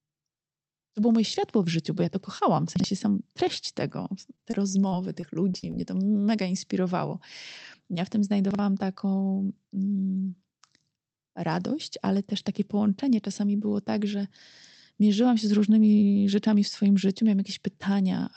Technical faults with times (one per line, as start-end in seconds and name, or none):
2.76-2.84 chunks out of order
4.35-5.75 repeated packet loss (robotic sound)
8.51-8.59 chunks out of order